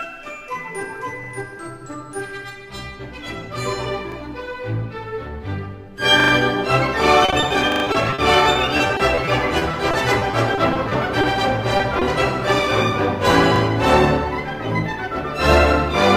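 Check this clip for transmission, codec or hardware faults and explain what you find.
Three kinds of fault are present: repeated buffers, a stretch of repeated packet loss, and two short concealed packet losses.

Repeated buffer at 1.24 to 1.28, 4.12 to 4.16, 6.2 to 6.32, 7.72 to 7.84 and 13.56 to 13.6 s. The output ran dry and replayed the same 40 ms chunk, once at the short events and three times at 6.2 and 7.72 s. Each is heard as a stutter. The waveform shows identical blocks butted together, and the spectrogram shows vertical seams at each join.

Repeated packet loss (robotic sound) from 7.25 to 11.25 s. Losses kept recurring, each gap no longer than 40 ms, and about 13% of the span was patched by extending the previous sound. The audio turns choppy, with pieces missing. The spectrogram shows smeared, flattened harmonics broken by frequent discontinuities.

Short concealed packet loss at 11.77 to 11.81 s and 11.99 to 12.03 s. 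Each time about 20 ms failed to arrive and was filled by continuing the last sound before blending back. These come through as brief smears or wobbles. The waveform shows a slightly too-regular patch, and the spectrogram shows a faint smudged column.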